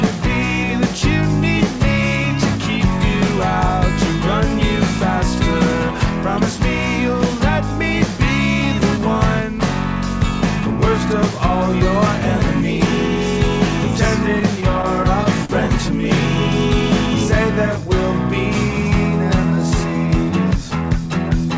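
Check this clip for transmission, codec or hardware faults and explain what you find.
One transmission fault appears, heard through a call path whose bandwidth stops at 8 kHz, which fits G.722. Repeated stalls (stutter) occur from 14.40 to 15.51 s: late packets repeatedly emptied the jitter buffer, so six brief gaps, the longest 41 ms, were filled by stretching the preceding sound, making it drag and stutter.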